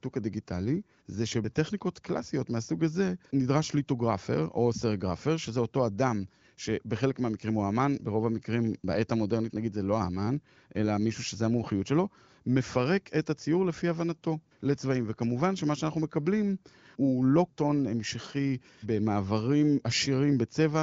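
No technical faults can be heard in this speech, which has been carried through an AMR wideband (HD Voice) codec at what sounds like one of its higher rates, consistent with roughly 18 kbit/s, and has nothing above 7.6 kHz.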